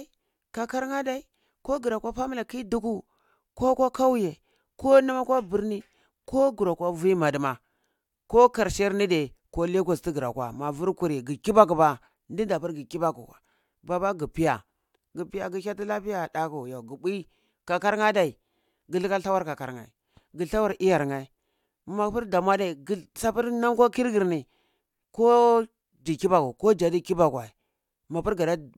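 Nothing in this speech recording stands out as a technical fault; there's nothing here to flag.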